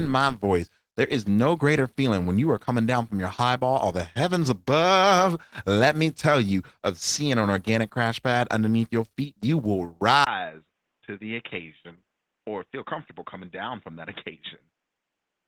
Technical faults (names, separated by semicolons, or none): Opus voice compression; input switched to a poorer device